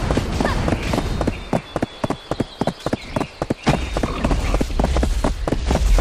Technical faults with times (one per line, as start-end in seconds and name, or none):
0.72 audio missing between chunks
1.69 audio missing between chunks
3.64 audio missing between chunks
4.62 audio missing between chunks
5.59 audio missing between chunks